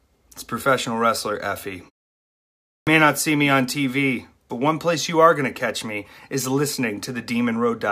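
At 2.76 s the speech resumes abruptly out of silence, its first sounds missing for about 110 ms. This is a clipped start after a pause: after roughly a second of quiet, the output device had gone idle and needed time to wake before passing sound again.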